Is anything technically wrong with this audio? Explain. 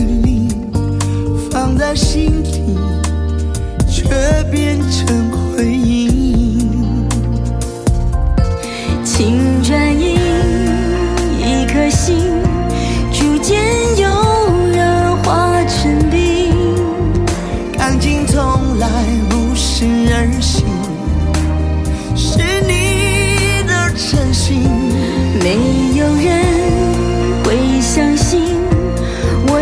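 No, nothing technically wrong turns up anywhere in this recording.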